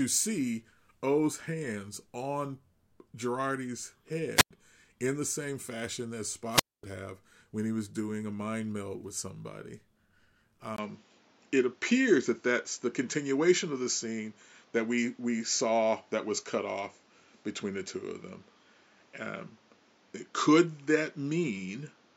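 A speech recording in which hiss briefly rises and the sound drops into near silence at 4.36–4.51 s (a 97 ms mute, just before "in the same fashion") and at 6.48–6.84 s (a 240 ms mute, between "the same fashion that" and "have when he was"), a wireless microphone squelch dropout as the radio signal fades and the receiver mutes. From 10.76 s to the end, after a 20 ms gap, the speech turns duller and shifts roughly 5 dB in level, with nothing above 7.6 kHz and new background noise around 35 dB below it, likely because the input switched to a poorer device.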